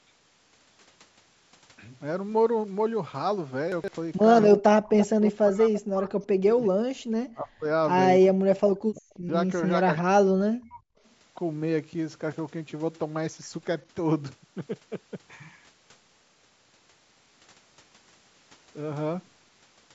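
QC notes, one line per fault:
3.72–3.88 s and 14.68–14.84 s, chunks out of order. A 40 ms chunk of audio plays three chunks late, after the 120 ms of sound that should follow it. Nothing is lost, but the order is scrambled. Each spot sounds briefly jumbled, with three hard joins.
4.57–6.62 s, 6.96–7.66 s, 8.28–9.30 s and 9.71–10.88 s, speech suppressed in double talk. The near talker's level dips, thins and drops out in pieces, by up to about 40 dB (about 35 dB in the second span). The likely cause is an echo canceller turning down both sides while both talk at once.
5.00–5.06 s, 5.73–5.77 s, 6.64–6.69 s and 8.95–9.19 s, echo leak. Short scraps of a copy of the speech arrive 337 ms late, at about 15 to 30 dB below the direct speech, fading with each scrap. This likely comes from a loudspeaker echo that the far-side canceller did not fully remove.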